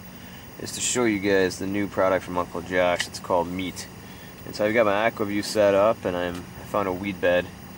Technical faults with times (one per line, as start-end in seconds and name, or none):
0.00-7.78 timecode bleed